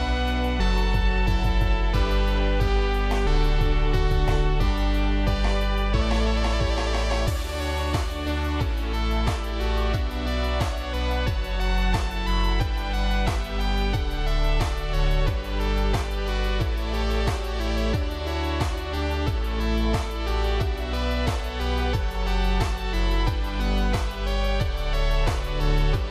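Nothing here calls for comment, since no technical faults turn up anywhere in the recording.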